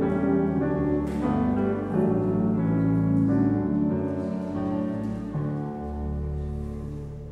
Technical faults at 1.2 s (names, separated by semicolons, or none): none